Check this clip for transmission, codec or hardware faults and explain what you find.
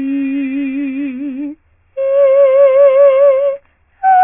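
One fault runs through the whole clip: aliasing. The music has been taken down to a low sample rate, which fits a drop to about 6 kHz, with no filter first. Everything above the 3 kHz fold point mirrors back below it. Those folded tones land at pitches unrelated to the music. They sit roughly 30 dB under it, so they read as a faint metallic grit over the bright parts. The band also stops abruptly at 3 kHz.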